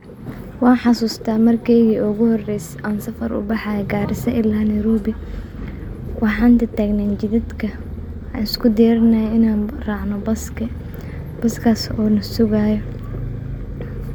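Speech recording, with no technical fault audible anywhere in it.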